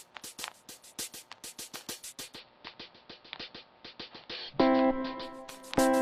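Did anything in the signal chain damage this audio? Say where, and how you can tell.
Yes. From 2.02 s to 5.61 s the audio shows digital radio blending to analogue, a reception-stage fault. The receiver lost its digital stream and cross-faded, over about 394 ms, to the AM broadcast of the same station. During that span hiss sits roughly 40 dB below the signal, and the level shifts by about 2 dB. On a spectrogram a faint noise floor fills in across that stretch.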